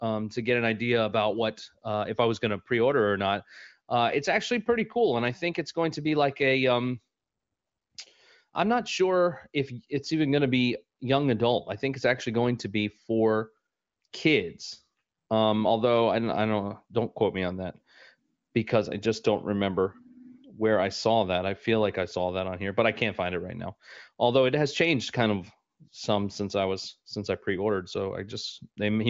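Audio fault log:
No faults heard; the speech passes intact.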